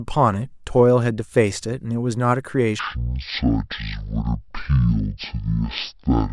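From 2.79 s on, a wrong sample rate leaves the speech at half speed and 12 semitones low, fitting 48 kHz played at 24 kHz.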